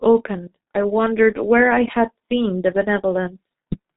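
G.723.1 codec damage runs through the whole speech clip: nothing passes above about 3.8 kHz, and the coarse 30 ms frames with slowly updated voice modelling leave the speech muffled and hoarse with smeared consonants, heavy degradation that fits a bitrate near 6 kbit/s.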